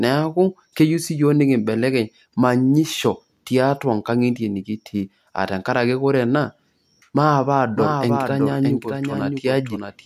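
At about 7.75 s a doubled audio track kicks in and runs right to the end. A second full-band copy of the speech suddenly appears, trailing the original by roughly 0.7 s and sitting a few dB lower, around 5 dB down. It's dry, with no decay or room colour, so it sounds like a flat, out-of-step twin talking over itself. The likely cause is the same signal being picked up again through a slower path and mixed back in.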